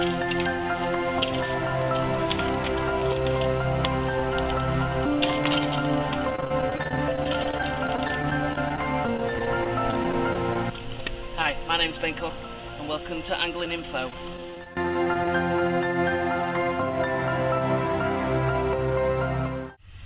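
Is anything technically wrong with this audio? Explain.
Yes. Packet loss shows up at three points, two stretches of repeated loss and one isolated one, over a call path whose narrowband sound, with nothing above 4 kHz, fits G.711.

Repeated packet loss (robotic sound), 6.30 to 10.56 s and 14.10 to 15.28 s: packets kept being lost in quick succession, each hole, none longer than about 28 ms, patched by extending the last sound. The result is choppy, robotic sound with missing pieces. Unlike a single dropout, the holes keep coming.

Short concealed packet loss at 13.66 s: one brief hole was filled by continuing the preceding sound before blending back. It is heard as a momentary smear, isolated rather than recurring.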